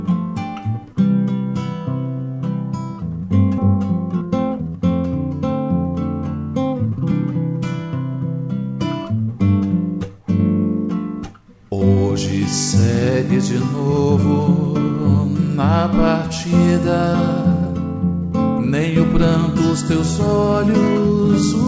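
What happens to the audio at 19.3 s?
Nothing goes wrong at 19.3 s: the audio carries on intact through that moment, still band-limited to nothing above 8 kHz as it is throughout the G.722 call path.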